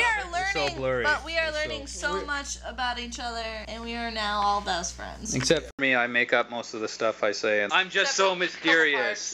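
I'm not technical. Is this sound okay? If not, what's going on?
No. A steady low buzz runs through the whole clip. This is mains hum, electrical power leaking into the signal at 60 Hz.

At 5.71 s the sound cuts out for a split second. Then it turns duller, changes loudness and gains a background hiss. The input likely switched to a poorer device.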